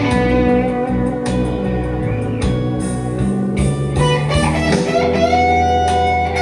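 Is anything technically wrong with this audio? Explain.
No, no technical faults detected.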